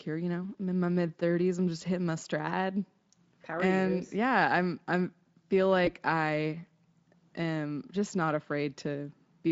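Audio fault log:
5.85–5.90 s, VoIP packet loss concealed by the speech codec: after "yeah I'm I'm feel", about 20 ms of sound goes missing, so the decoder repeats its last pitch and filter at falling gain, a brief fading smear. The spectrogram shows flat, fading stripes, and the waveform shows a short envelope dip.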